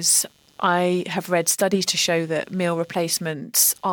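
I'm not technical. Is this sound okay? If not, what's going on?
No, not quite. Underneath the speech there's a faint, rough buzz running the whole way through, pulsing roughly 150 times a second. That's computer activity noise: the computer's changing workload disturbs the audio wiring, so the buzz follows the machine, not the speaker.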